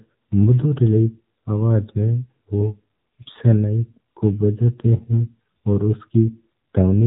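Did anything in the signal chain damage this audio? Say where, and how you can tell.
Yes. The damage happens at the codec stage and lasts for the whole clip. This is AMR narrowband mobile codec coding, and the damage is plainly audible. The speech has nothing above 4 kHz, so it sounds dull and boxed in. The voice also has a buzzy, synthetic edge. The codec rebuilds speech from a vocal-tract model driven by a few pulses per short subframe. With so little detail kept, the result points to one of AMR-NB's lower modes, roughly 7.4 kbps.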